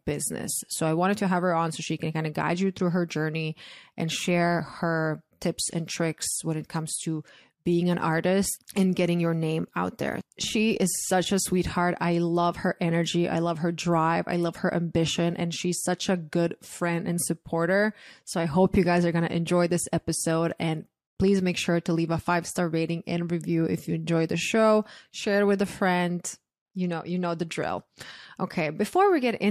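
No technical faults are audible anywhere in the recording.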